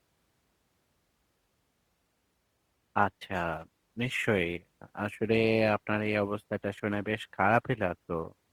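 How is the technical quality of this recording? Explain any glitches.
The quality drops sharply at 1.84 s and stays degraded to the end. From that point there are more codec artefacts, and the change is sudden with no gap. This is an adaptive stream at a lower bitrate: the player switched to a cheaper version of the stream, probably because the connection slowed, and the sound fits a drop from about 64 to 24 kbit/s Opus.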